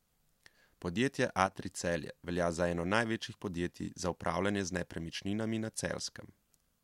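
Speech, with one channel dropping out from 1.46 to 1.51 s: about 6 dB down, a short notch in the waveform and a full-band spectrogram dip, likely from one stereo side cutting out.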